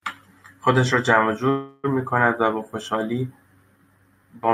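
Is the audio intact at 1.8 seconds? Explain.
No. A call audio freeze runs from 1.49 to 1.86 s. The last sound is stretched into a fading buzz or hiss for about 343 ms, likely because delayed packets emptied the jitter buffer. The speech then resumes where it stopped, with nothing lost but everything after arriving 343 ms late.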